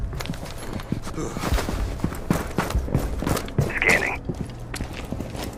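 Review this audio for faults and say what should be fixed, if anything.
From 3.39 s to 5.58 s a gritty, inharmonic fizz rides on top of the audio, strongest on loud and bright passages, with faint tones that bear no relation to the material. This is crude rate conversion: the pattern points to samples being linearly interpolated without an anti-aliasing filter, which fits a jump from 44.1 kHz to 48 kHz, leaving a periodic error roughly 35 dB below the signal. To prevent it, resample with a proper band-limited (polyphase or sinc) converter.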